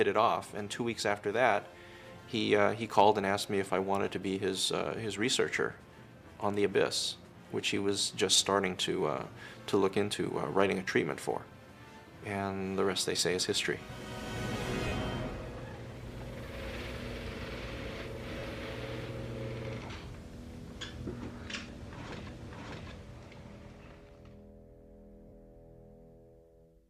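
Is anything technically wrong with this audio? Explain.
Yes. There are lost LE Audio frames at 14.88, 18.39 and 25.28 s. Each gap lasts about 40 ms. The decoder repeats the last spectrum with random signs, so the sound briefly smears into noise.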